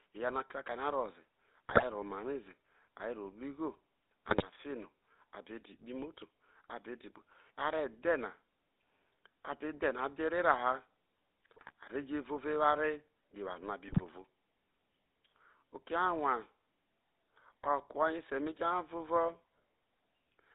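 From the start to the end, the speech carries the buzzy, gravelly roughness of the GSM full-rate codec, consistent with a 13 kbps stream. The codec rebuilds the voice from a vocal-tract model driven by coarsely spaced excitation pulses, and that thin excitation produces the grit. On a spectrogram, energy sits between 250 Hz and 3.7 kHz with a hard ceiling and blank space above it. Within that band the harmonics look smeared and grainy rather than cleanly striped.

GSM bit errors break through four times: at 1.69 to 1.83 s just after "ro ze", at 4.28 to 4.45 s, at 11.54 to 11.72 s just before "a re", and at 13.88 to 14.02 s right after "eware no a bi". Corrupted filter, pitch and gain values reach the decoder, so each burst turns into squawks, pops and gargling. The spectrogram shows short blocks of distorted, misplaced energy in those spans.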